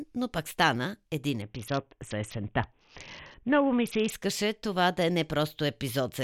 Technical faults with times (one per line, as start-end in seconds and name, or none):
1.42-4.12 Bluetooth SBC bit pool drop